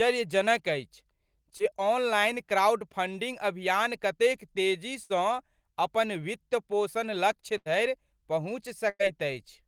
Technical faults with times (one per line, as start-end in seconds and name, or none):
1.57-1.61 short concealed packet loss
5.03-5.12 burst of packet loss
7.58-7.68 burst of packet loss
8.90-9.01 burst of packet loss